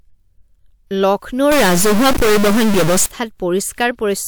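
From 1.52 s to 3.07 s the speech is corrupted. The sound fits a stuck bit. One bit in each sample seems fixed at the same value. About half the samples are then off by that bit's weight. Which samples are hit follows the shape of the waveform, so the error tracks the speech. Quiet gaps in this stretch fill with noise. The likely cause is a broken data line or converter.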